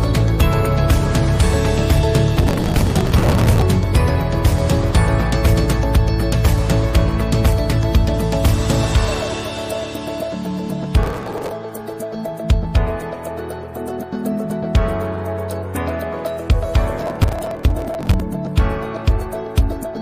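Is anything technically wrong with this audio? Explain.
Yes. Processor overload crackle occurs from 2.37 to 3.62 s, 11.03 to 11.52 s and 16.98 to 18.2 s: many tiny skipped buffers, likely around 3 ms each, produce gritty tearing. Its fine, dense grain distinguishes it from longer, sparser dropouts.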